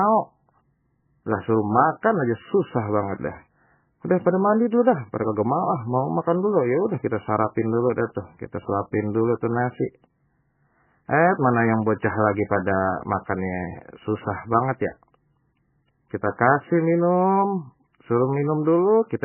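MP3 compression runs through the whole speech clip: nothing sounds above 3 kHz, and heavy swirling, watery artefacts smear the attacks. The encoder has likely starved for bits, which fits a bitrate near 10 kbps, so it dropped the treble and let weak frequency lines flicker between frames.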